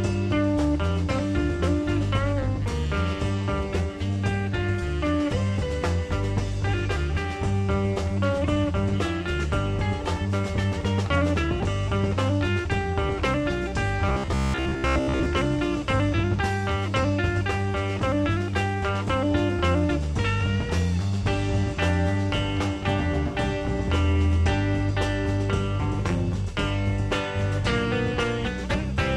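Robotic sound from repeated short buffers runs from 14.09 to 15.26 s. Most of the sound in that stretch turns into a rigid, metallic buzz at about 66.7 Hz, still loosely tracing the original contour. The likely cause is new audio arriving too seldom, so playback fills the gaps by looping the last fragment while real material is skipped. A buzz at that pitch fits fragments about 15 ms long.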